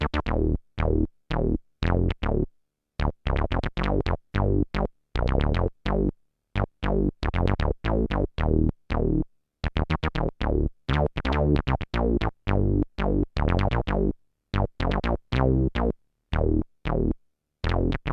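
No technical faults can be heard anywhere in this audio.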